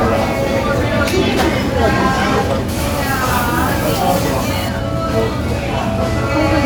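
From 2.69 to 4.69 s the sound turns thin, bright and edgy: pre-emphasis left on. The treble lift that an FM 50 µs curve applies before transmission was never undone by the matching de-emphasis, so highs stand about 10 dB above 1 kHz by 10 kHz. Unlike added hiss or aliasing, nothing new appears. The existing content is tilted upward on a smooth slope rising from the low kHz range.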